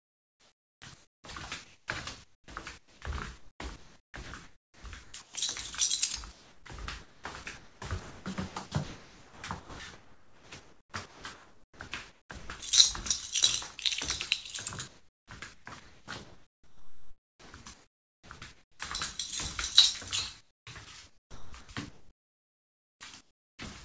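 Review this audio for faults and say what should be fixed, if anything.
Comfort noise in place of the background: from the start to 1.24 s, then at 1.64–1.88, 2.24–2.48 and 2.78–3.02 s, the real ambience gives way to a flat, featureless hiss. It drops by about 5, 15 and 7 dB in the three short gaps, against a background about 21 to 23 dB below the loud parts. The likely cause is discontinuous transmission, with the receiver synthesising noise during pauses. Unlike chopping, the wanted sound itself stays whole. Disabling DTX, or lowering the detector threshold, prevents it.

Sound chopped by the voice detector: across 3.38–5.34, 6.32–12.62, 14.88–18.80 and 20.39–23.59 s, the sending gate repeatedly opens and closes. Roughly 1.3, 4.0, 3.0 and 2.3 s of material are swapped for synthetic fill, so quieter sounds and onsets drop out. This is likely a voice detector tuned for speech misjudging non-speech audio. 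It differs from comfort noise in pauses because content is lost, not just ambience. Turning off VAD/DTX for non-speech sources prevents it. The call path's wideband codec, with nothing above 8 kHz, is not a fault.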